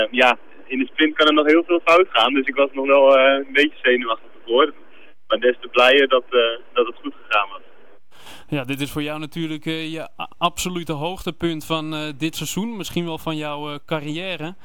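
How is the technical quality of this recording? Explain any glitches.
No glitches or faults heard.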